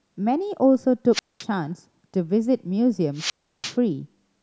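A speech recording broken twice by a wireless microphone squelch dropout, at 1.13 to 1.44 s with a mute of about 215 ms, and at 3.15 to 3.75 s with a mute of about 340 ms. Each time the radio link fades, hiss swells, then the receiver's squelch shuts the output to near silence before the voice returns. That brief noise rise before the hole distinguishes it from a digital dropout, which falls silent abruptly.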